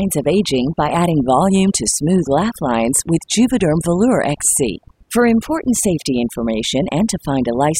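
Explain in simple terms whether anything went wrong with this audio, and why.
Overdone noise removal runs through the whole clip: a noise reducer set too strong erased the background and quieter parts of speech, leaving twinkling, warbling specks.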